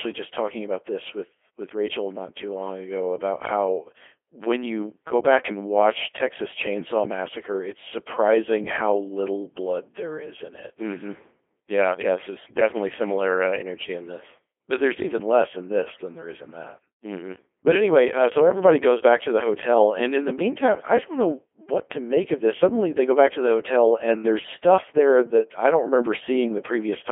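From start to finish the speech sounds robotic and buzzy, thin and boxed into a telephone-like band of roughly 300 Hz to 3.4 kHz, with nothing above 3.5 kHz. The damage is heavy throughout. This is the Codec 2 vocoder at work. Rather than keeping the waveform, it transmits only pitch, voicing, energy and a spectral envelope, and the decoder rebuilds the voice from sine waves. The result fits a very low rate around 2.4 kbit/s.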